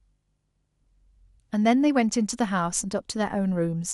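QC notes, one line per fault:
throughout: MP2 compression. The speech was likely passed through an MPEG Layer II encoder starved of bits, which fits a rate near 80 kbps. Upper sub-bands switch off and flicker while the remainder are coarsely quantised, giving a plainly audible dull, gurgling, granular texture.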